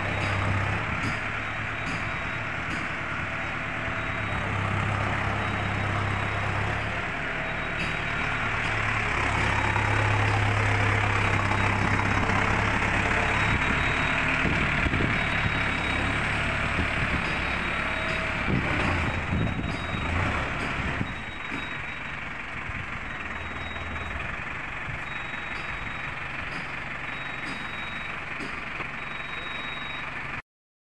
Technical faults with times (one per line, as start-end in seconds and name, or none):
8.65-8.68 damaged data in a compressed stream
18.78-18.82 damaged data in a compressed stream
28.79-28.82 damaged data in a compressed stream